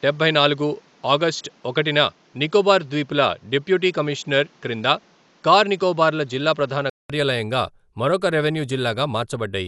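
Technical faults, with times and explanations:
Throughout, Dolby Digital compression: the speech has a plainly audible coded roughness, with nothing above 11.4 kHz. That points to an AC-3 stream at a low bitrate, likely around 64 kbps, where the encoder narrows the band and fills starved frequency lines with dither noise.
0.0 to 7.1 s, input switched to a poorer device: the opening stretch is duller and narrower, capped at 7.6 kHz, with a faint extra background noise well below the speech. It opens up at 7.1 s after a 200 ms gap, likely a switch from a lesser microphone, with the level staying about the same.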